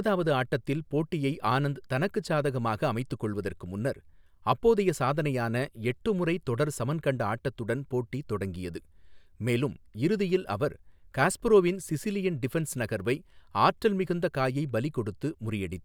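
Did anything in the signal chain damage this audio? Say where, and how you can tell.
No, nothing in the chain seems to have damaged this speech, and there's nothing anywhere in it that points to a problem at any stage.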